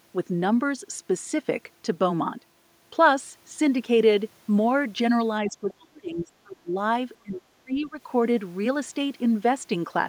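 Speech suppressed in double talk begins at 5.46 s and runs to 6.77 s. The talker's level dips hard, at its worst by around 30 dB, with about a second of the passage audibly pulled down or broken up. This is likely an echo canceller that, faced with both ends talking at once, could not tell the local voice from the loudspeaker echo and attenuated everything.

The other side's voice leaking through appears right at that onset, from 5.47 to 5.51 s, as a brief scrap of a second voice roughly 30 dB below the talker. Some of the far end's loudspeaker playback likely reached the microphone and was not fully removed.

Speech suppressed in double talk returns from 7.22 to 7.99 s, with a shallower dip of around 25 dB, and most of that span sounds ducked or chopped. The same likely failure to separate overlapping talkers is behind it.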